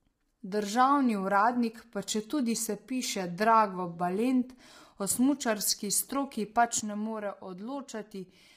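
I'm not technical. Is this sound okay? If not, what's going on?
No. Low-delay AAC compression, heard throughout: the voice sounds rough and grainy, with a hiss between the tones and a dull or artificial top end. The likely cause is squeezing the speech hard into the short audio chunks that video-call systems use, which leaves too little detail to capture it cleanly.

One channel drops out, at 2.90 to 3.03 s and again from 6.80 s to the end: the voice suddenly becomes noticeably quieter. One side of the stereo signal has likely gone missing, so when both sides are combined, only half the sound remains.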